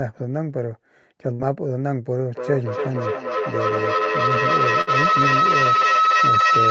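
At 1.33 s a burst of packet loss holds the last sound for about 60 ms and lets it fade until 1.42 s. Speech then resumes about 60 ms further on. The receiver concealed the lost packets by extending and attenuating what came before.

From 2.31 s to the end a feedback howl rises to about 7 dB above the speech, centred near 1.5 kHz, with the loop repeating roughly every 0.3 s. Two devices in one room share the call, and each pass through the loop gains level.

A second burst of packet loss at 4.81 s repeats the pattern, with about 55 ms of held, fading sound to 4.90 s before the speech jumps ahead by about 60 ms, under the continuing howl.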